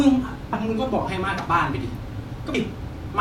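Speech with compressed frames skipped at two points: at 0.53 s the audio jumps ahead by around five 32 ms frames, about 150 ms, and at 2.54 s by roughly twenty frames, close to 0.7 s. On a waveform the envelope changes abruptly without a gap, and a spectrogram shows harmonic tracks broken off and resuming.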